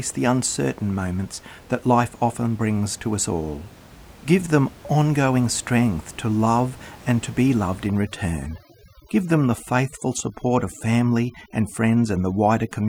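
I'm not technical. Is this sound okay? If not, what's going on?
No. From about 7.87 seconds, right after "and to be loved", through to the end, you can hear overdone noise removal. A cleanup tool that strips out background noise was set far too strong. It mutes any sliver of sound that resembles the noise, and soft parts of the voice get cut too. The quiet room noise drops away and breaks up into twinkling specks.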